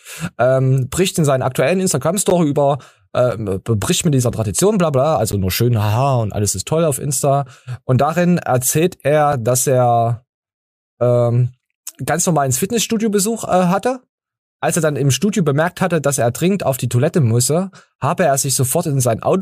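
It's a speech clip with a gap between stream segments: short hard-edged dropouts to silence at 2.30 s (right after "bricht in seinen aktuellen"), 3.31, 4.32, 5.32 (between "bla bla" and "nur schön haha und") and 9.32 s (between "darin erzählt" and "dass er"). They fall on a one-second grid, so the segment timestamps leave holes of roughly 4 to 12 ms that the player pads with silence. Nothing's actually missing, the audio just gets pushed slightly later.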